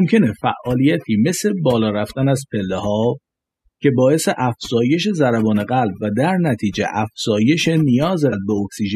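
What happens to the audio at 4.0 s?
At 4.0 s the speech shows overdone noise removal, which runs through the whole clip. A noise reducer set too hard is muting frequency bands near its noise estimate. Quiet parts of the voice vanish with them. Background drops and breaks up into twinkling, warbling specks.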